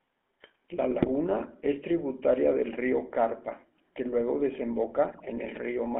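Throughout the clip the speech has passed through a GSM full-rate codec, whose rough, buzzy texture points to the original 13 kbps coder. It rebuilds each frame from a vocal-tract filter fed by a coarse pulse-train excitation, so fine detail is lost and the speech takes on a plainly audible gravelly buzz. The line band of 250 Hz to 3.4 kHz also strips away the low body and the upper sibilance.

From 1.02 to 1.10 s, just before "es tributaria del río", GSM bit errors corrupt the decoder's filter, pitch and gain parameters across a span that fits about four frames, consistent with around 1.6% of bits flipped. The spectrum warps and the level jumps, so the sound breaks into a short squawking gargle. The same fault returns from 5.12 to 5.22 s over roughly five frames at a slightly lower error rate, about 1.1%, and produces a similar burst of pops and garbled distortion.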